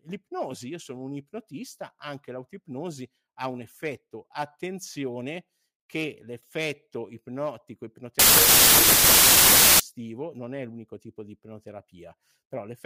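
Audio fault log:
8.19–9.80 s, wrong sample width: after "attenzione che l'effetto ipnotico", loud noise buries the speech. It runs at 0.75 speed, lower in pitch. This fits 32-bit data read as 24-bit.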